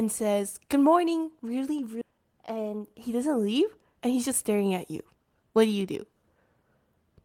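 A skip ahead occurs at 2.01 to 2.03 s, right after "morning really". About a second of speech was dropped, either in transit or by an overflowing jitter buffer, while later audio was already queued. Playback jumps forward and the two sides join almost directly, with nothing filled in.

A jitter buffer speed-up follows from 2.11 to 3.95 s, ending just before "and he's just staring". With too much audio held, the receiver repeatedly cut short pitch-period pieces, about a fifth of a second in total. Speech runs at 110% speed with unchanged pitch and sounds hurried.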